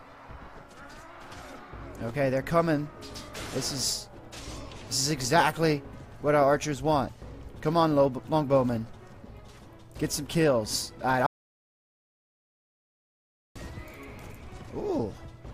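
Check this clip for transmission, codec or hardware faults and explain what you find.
There is one fault, an audio dropout to silence, from 11.26 s to 13.56 s. The sound cuts off abruptly and returns just as suddenly about 2.3 s later, and nothing at all is heard in between, not even background noise. The likely cause is the input being lost, through a disconnected device, a broken link or an accidental mute, while recording carried on writing silence. On the waveform this is a flat line; on a spectrogram, a solid black band across every frequency.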